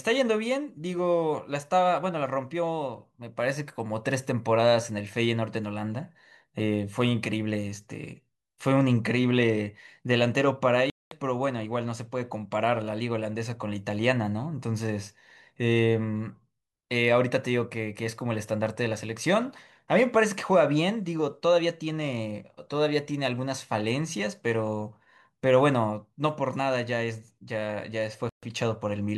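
Bluetooth stalls at 10.90 s and 28.29 s cut the speech to silence for 214 ms and 135 ms before it resumes. The likely cause is radio interference delaying packets until the headphones' buffer ran empty and playback waited for retransmissions.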